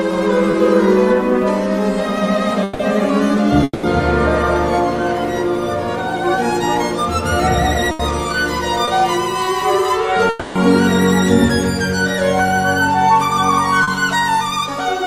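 At 0.51 to 0.55 s there is short concealed packet loss: about 20 ms of audio missed the decoder, and the receiver extended the preceding sound to cover it. The result is a brief smear or wobble before normal audio resumes.

From 2.63 to 2.81 s, and again from 3.63 to 3.85 s, the sound turns into a held buzz or hiss that fades and then cuts back in further along. This is likely a long network dropout, with about 160 ms and 200 ms lost; the second ends in roughly 20 ms of silence.

At 7.91 to 8.01 s a burst of packet loss removes about 80 ms. The last sound is held and turned down until playback jumps ahead.

Short concealed losses recur at 8.85 to 8.89 s and 13.83 to 13.89 s, the second lasting about 40 ms. Between them, at 10.29 to 10.57 s, the longest likely dropout stretches a fading continuation across about 260 ms.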